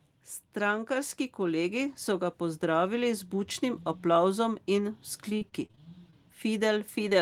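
Automatic gain rising, from 0.86 to 3.6 s: the gain control judged the input too quiet and lifted its level gradually by about 5 dB. Speech and background noise grow louder together over nearly three seconds, a slow swell rather than a jump.

Repeated packet loss with a robotic sound runs from 5.29 to 6.14 s. Audio kept failing to arrive, and each hole, the longest about 36 ms, was patched by extending the previous sound. Roughly a fifth of the stretch is synthetic fill, so the speech turns choppy.

Short concealed packet loss, from 7.09 to 7.13 s: about 20 ms of audio arrived too late to decode. The receiver bridged the hole by continuing the last sound before blending back into real audio, leaving a brief smear or wobble near the end of the clip.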